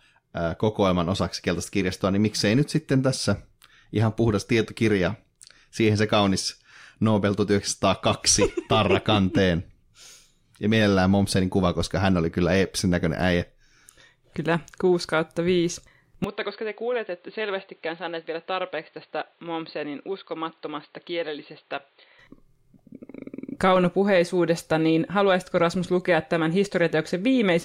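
At 16.24 s the speech abruptly turns dull and boxy, with nothing above 4.6 kHz, a level drop of about 10 dB and a new noise floor, until 22.19 s. This is likely an input switched to a poorer device, with no silence at either change.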